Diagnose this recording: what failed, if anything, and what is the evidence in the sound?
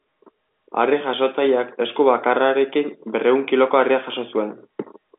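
Nothing in this speech recording has failed: it carries the ordinary narrowband character of a G.711 telephone line, with the speech confined to roughly 250 Hz to 3.6 kHz, no content above about 3.8 kHz, and at most a faint level-following quantisation hiss of the kind A-law coding leaves.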